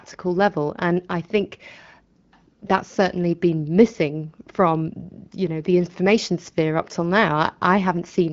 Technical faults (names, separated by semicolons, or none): none